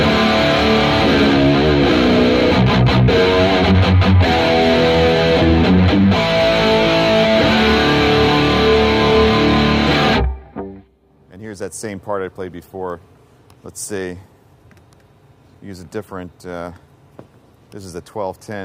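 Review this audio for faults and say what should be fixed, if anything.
Nothing needs to be fixed, as no faults can be heard in this audio.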